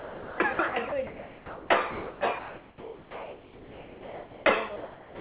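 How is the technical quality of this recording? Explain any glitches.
The recording keeps getting chopped up: over and over, the speech gives way to a flat bed of steady noise and then comes back. Underneath it all the band stops at 4 kHz, which fits a narrowband call codec, and there's some room noise about 28 dB below the speech.

The glitch is sound dropped by the voice detector, at 0.00–0.38, 0.53–0.59, 0.68–0.74, 0.89–0.92, 1.07–1.70, 1.91–2.21, 2.39–4.46 and 4.76–5.20 s. Most likely the sender's detector judged quieter stretches of speech as background and stopped transmitting, so the receiver filled in comfort noise. The short 30–60 ms ones clip bits of speech, and the long stretch from 2.39 to 4.46 s loses a good chunk of speech before the talking returns.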